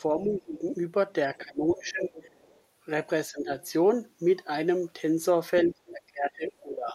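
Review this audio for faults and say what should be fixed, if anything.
Speech suppressed in double talk occurs four times: 0.16 to 0.64 s, 1.31 to 2.11 s, 3.31 to 3.5 s, and from 5.68 s to the end. The speech dips sharply each time, by about 15 to 20 dB at its deepest. The longest stretches lose close to a second of level. The likely cause is an echo canceller that hears both sides talking at once. It cannot tell the near talker from the loudspeaker echo, so it turns everything down.

The other side's voice leaking through appears at 2.14 to 2.61 s and again briefly at 5.86 to 5.91 s. It is a faint second voice, about 25 dB below the main speech. It is likely residual loudspeaker echo that the canceller failed to subtract from the microphone signal. The first leak follows directly on the second suppression dip.

To prevent both, use a headset or a better-converged echo canceller with proper double-talk detection.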